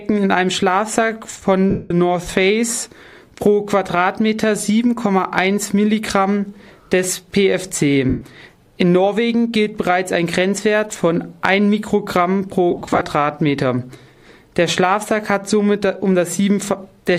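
Lost LE Audio frames occur at 1.70 to 1.91 s and 8.09 to 8.21 s, and are scattered across 12.71 to 13.01 s in runs of up to about 30 ms. The LC3 decoder fills each gap by repeating the last spectrum with randomised signs, so the sound smears into noise and fades.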